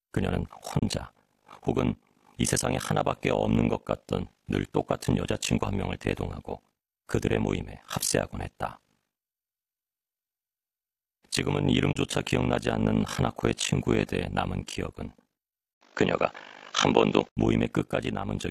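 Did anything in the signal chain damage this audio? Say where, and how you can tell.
Yes. Overlap-add ripple runs through the whole speech clip. It arises at a frame-based processing stage, where windowed frames were reassembled with an overlap that does not sum to constant gain. The level swings by about 60 dB once per frame, at a rate of around 50 Hz. It is heard as a fast, rough tremolo. The depth is large enough that the sound is effectively gated at the frame rate.

Digital broadcast dropout occurs twice, at 0.79 to 0.83 s and at 11.92 to 11.96 s. This is a reception or transport fault. Frames failed to arrive or failed their checks, and the receiver muted until valid data resumed. Each hole takes about 24 ms of audio, which fits a single lost frame, and has a quick fade of about 8 ms. The audio comes back afterwards, but the content inside each gap is gone.

Input switched to a poorer device, from 15.73 to 17.37 s, at the capture stage. 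An 80 ms silence marks the changeover. After it, the band is narrower, so the sound turns duller. The level shifts by about 5 dB, and a new noise floor appears, roughly 35 dB below the signal. The likely cause is the system changing to a different microphone or a headset call profile mid-recording.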